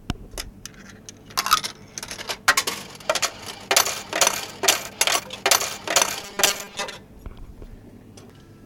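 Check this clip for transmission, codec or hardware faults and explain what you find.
One fault, a likely buffer underrun. From 6.22 to 6.96 s, robotic sound from repeated short buffers: roughly half the audio is replaced by repeats of a 5 ms slice, imposing a rigid 200 Hz metallic buzz. The spectrogram shows evenly spaced harmonic lines at 200 Hz multiples. The waveform shows identical 5 ms cycles.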